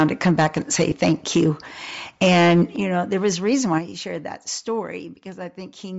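Bluetooth LC3 compression runs through the whole clip. The speech has a breathy, grainy edge and a dulled top end, likely from the codec zeroing upper bands and filling them with noise, which fits about 32 kbps with 10 ms frames.

Microphone overload comes first, from 0.0 to 1.49 s. The loudest syllables crackle harshly because the peaks exceed the converter's limit by about 8 dB. The tops of roughly a few percent of the waveform are likely squared off.

At 0.91 s, within that stretch, a lost LE Audio frame appears. One 10 ms frame is missing, and the decoder patches the gap by reusing the previous spectrum with scrambled phase, leaving a brief noisy smear.

Microphone overload returns from 2.22 to 2.63 s, again about 8 dB over the limit. This time around a fifth of the samples are likely flattened, so the crackle is much denser and harsher.

At 2.76 s the microphone volume is stepped down. 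Speech and background drop by about 9 dB at once, likely because the call software cut the input gain right after that distorted burst.

A milder microphone overload follows from 3.24 to 3.49 s, only about 1 dB over. It likely clips under one percent of samples, giving faint roughness on peaks.

At 3.78 s the microphone volume is stepped down again. The level falls abruptly by about 7 dB, likely another automatic one-step reduction of the input gain.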